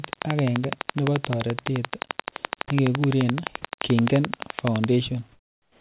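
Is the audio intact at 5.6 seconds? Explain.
No. From 5.32 s to the end of the clip at about 5.8 s, the real background has been replaced by comfort noise. This is likely discontinuous transmission: the sender stopped sending once its voice detector heard no speech, and the receiver filled the gap with synthetic noise. At 5.6 s you hear a flat, featureless hiss about 7 dB quieter than the room sound before it. It's band-limited to 4 kHz, which fits the G.711 call path.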